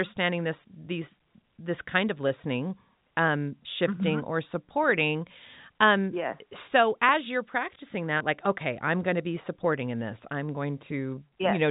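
It's speech coming through a call path whose band stops at 4 kHz, which fits G.711 A-law. There are three short concealed packet loss events: at 2.28 to 2.32 s after "these this kind of", at 8.18 to 8.22 s after "so as you're practicing", and at 10.46 to 10.5 s after "supporting in this i'm". Each time, 20 ms of audio didn't reach the decoder in time. The receiver covered the gap by extending the preceding sound and then blending back into the real signal, which gives a brief smear or wobble at each spot.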